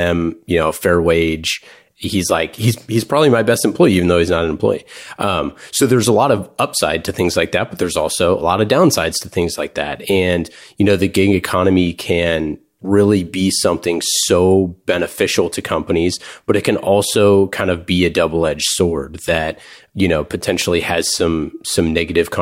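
Speech, with no technical fault to report anywhere in the recording. Nothing in it calls for a time stamp or a cause.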